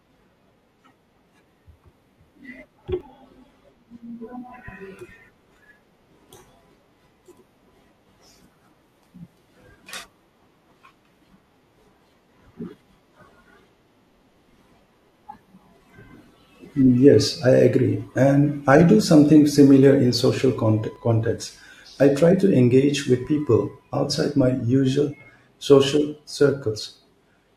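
Overlap between stream segments occurs at 3.01, 20.96 and 26.96 seconds. Overlapping segment time stamps make the player trim speech that was never duplicated, so between 5 and 17 milliseconds vanish and the waveform jumps, giving a click or tiny skip. The last two fall 6 seconds apart, matching the segment length.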